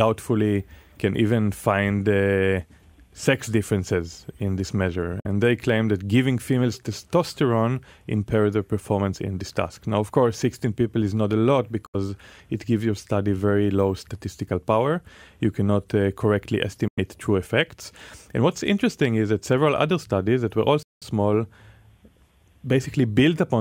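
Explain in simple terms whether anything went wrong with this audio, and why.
Bluetooth dropout at 5.20, 11.86, 16.88 and 20.83 s: the sound suddenly goes silent for about 0.07 to 0.21 seconds each time, longest at 20.83 s, then picks up further along as if it had kept playing. The likely cause is chunks of audio reaching the headphones too late to play, so they were thrown away.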